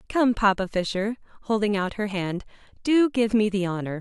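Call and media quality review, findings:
Nothing stood out on listening; no findings to log for this speech clip.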